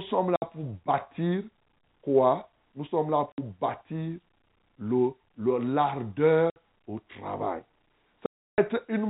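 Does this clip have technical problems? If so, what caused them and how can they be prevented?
Yes. Packet loss filled with silence cuts the speech at 0.36–0.42 s, 3.32–3.38 s and 6.5–6.56 s, each a 60 ms hole, and at 8.26–8.58 s, a longer 320 ms gap. Audio packets never arrived, so the receiver played nothing in their place, leaving abrupt holes with hard edges. The lengths fit 20 ms packets, about three lost at a time and a burst of sixteen at the end, all within the narrow, sub-4 kHz G.711 telephone band. Enabling packet loss concealment and a jitter buffer, or adding forward error correction, would fill or prevent these gaps.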